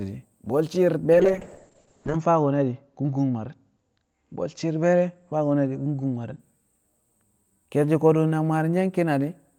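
Right after "bwe̱l shi̱i̱r", at 1.15 s, there's a call bitrate drop lasting until 6.45 s. The top end closes in from 20 kHz to 8 kHz and the speech goes muffled and rough, bottoming out for 1.02 s, which fits the encoder falling from 32 kbps to 6 kbps.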